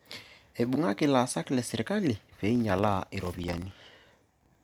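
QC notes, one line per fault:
2.32 to 4.64 s, filter restarted on every block: each block, which fits 2048 samples, starts from silence, giving a 21.5 Hz tick-buzz that tracks speech level, unlike steady hum.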